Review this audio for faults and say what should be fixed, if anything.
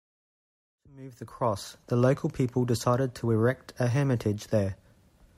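Nothing should be fixed, because the review finds no faults in this audio, and the gradual fade-in that ends at about 2.08 s is smooth.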